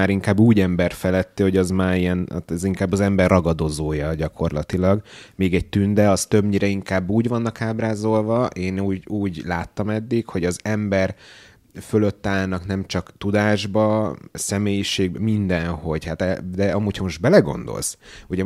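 A speech recording with no technical faults to report. Nothing in it calls for a time, a cause or a fix.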